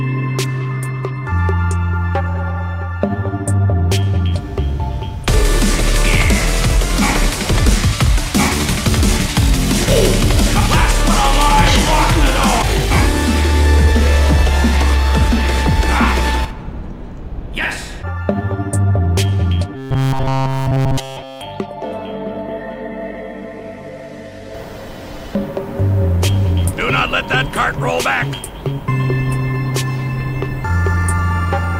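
From 19.76 to 21.41 s the sound becomes a rigid metallic buzz near 133 Hz, robotic sound from repeated short buffers, likely about 7.5 ms chunks looped throughout.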